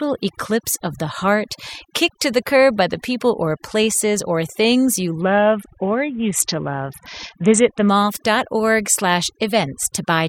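A speech recording with overdone noise removal throughout. The denoiser was set too strong. It pulls frequency bands down wherever they sit near its noise estimate, taking quiet parts of the voice with them. The background drops and breaks up into twinkling specks. From 5.21 to 7.89 s, just after "places or things you", there is a Bluetooth SBC bit pool drop. The treble dulls and a gritty noise rises. This fits a congested link cutting the bit pool from 28 to 6, around 60 kbps, starving the upper sub-bands until the rate recovers.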